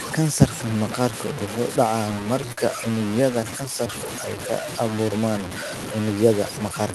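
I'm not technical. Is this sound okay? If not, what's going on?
No, it isn't. The speech has several separate problems.

Throughout the clip the speech sounds grainy and rough, with a crackly texture that follows the speech up and down. Quiet moments sound especially gritty. The likely cause is low bit depth without dither. The sound seems to have been stored with very few volume steps, perhaps only about 5 bits, and cut down crudely rather than smoothly. The rounding noise is loud, not far below the speech itself.

At about 2.52 to 2.59 s there is a short stall from a late packet. This recording went through an internet call. A piece of the audio arrived too late. To cover the gap, the receiving end stretched the last bit of sound by about 50 ms. Nothing is lost. But one sound is held a little too long, and you may hear a faint buzz there.

From about 3.40 to 3.88 s there are repeated stalls, or stutter. 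The same thing happens four times in quick succession. Each time the audio runs out briefly and the last sound is stretched. None of these gaps is longer than about 11 ms. Nothing is missing. But the speech catches and hiccups through this half-second, rather than flowing smoothly.

From about 3.98 to 5.39 s there is a jitter buffer slow-down. The call software wanted to build up a little spare audio, so it quietly repeated tiny slices of the sound. This adds about 0.1 s in total. The speech plays at roughly 93% speed, slightly slower than normal. The pitch does not change. Sounds feel drawn out, and there may be a slight wobble.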